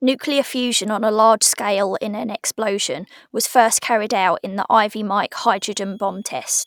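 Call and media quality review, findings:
Switching supply whistle, 5.44 s to clip end at 6.67 s. High, faint whine around 3.3 kHz, wandering between 3.26 and 3.37 kHz, roughly 40 dB under the speech. Probable component: a switch-mode power supply in the capture chain. Mechanism: the regulator drops into an audible burst mode or beats against another supply, and its frequency shifts as the load varies.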